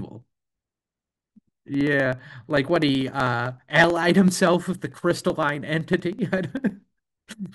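Periodic USB or driver dropouts run from 0.09 s to 7.46 s, recurring every 63.5 ms, around sixteen times a second. Each time, something stalls the USB link or audio driver, and a fraction of a millisecond of the speech is skipped outright rather than padded with silence. The splice leaves a small discontinuity, heard as a steady, evenly spaced ticking riding on the voice that disappears in the pauses between phrases.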